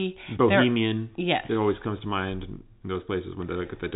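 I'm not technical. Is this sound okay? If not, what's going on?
Yes, the speech is fine; it has the narrow, slightly boxy sound of an ordinary landline call because telephone coding drops everything above about 3.8 kHz, and that is normal.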